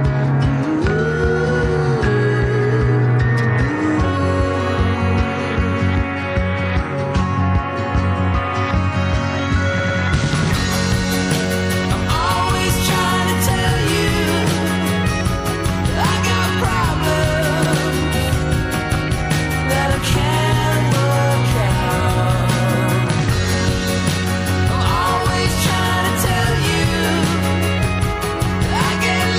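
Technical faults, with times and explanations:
Throughout, MP3 compression: heavy data reduction, which fits roughly 64 kbps, likely leaves too few bits for the frequency lines, so weak components flicker on and off between frames, giving a watery, swirly texture, metallic chirps on sibilant and bright sounds, and smeared attacks.
9.79 to 9.99 s, 17.65 to 17.75 s and 20.10 to 20.13 s, repeated frames: blocks of compressed frames were played again, a 104.5 ms block twice more at 9.79 s, once at 17.65 s, and a 26.1 ms block once at 20.10 s, producing audible stutters and lengthening the audio by the repeated time.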